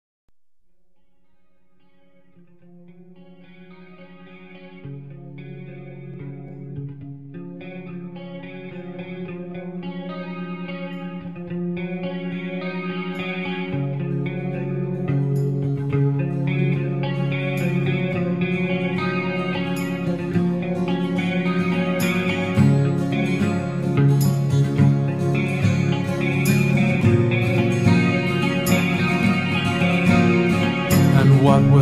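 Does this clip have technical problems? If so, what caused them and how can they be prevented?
No, there are no technical problems to report.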